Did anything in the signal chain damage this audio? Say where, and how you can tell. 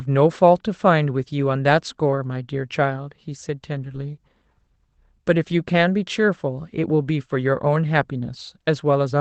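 Yes, at the network stage. Three brief rough, noisy patches sit in the speech with no dropout: at 2.11 to 2.17 s, 3.81 to 3.95 s, and 5.49 s. These are lost packets rebuilt from error correction. Packets went missing, and the decoder filled each hole with the low-bitrate Opus copy carried in the following packet. The lengths fit roughly two, four and one 20 ms packets. The coarser copy explains the grain, and the seamless fill explains the absence of gaps.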